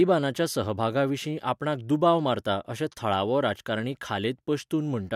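Two clocks likely running free of each other, drifting apart by something like 40 parts per million, would drop or repeat a single sample each time the gap reaches a whole sample. That is what the clock slip clicks in this speech point to. From 0.21 s to 5.01 s, faint ticks recur about every half second, around ten in all. They are evenly spaced, and each is a single-sample jump in the waveform.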